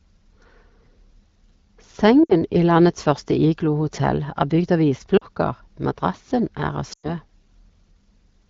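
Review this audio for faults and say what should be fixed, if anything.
Lost AMR speech frames cause gaps at 2.23 to 2.34 s, 5.17 to 5.24 s and 6.93 to 7.12 s, each about 60 ms, 40 ms and 100 ms of missing audio, which fits runs of three, two and five 20 ms frames. The decoder carries the last good pitch and vocal tract settings forward at decreasing gain, so the speech smears briefly and sags. The longest gap, at 6.93 s, fades almost to silence before the speech returns thin and rough. On a spectrogram the harmonics flatten into steady horizontal streaks that dim. The waveform envelope drops and then recovers. The AMR wideband (HD Voice) codec is audible as slight coding texture, which fits the 12.65 kbit/s mode. To prevent the dropouts, strengthen the radio link or use a more robust channel coding mode so frames stop failing their checksum.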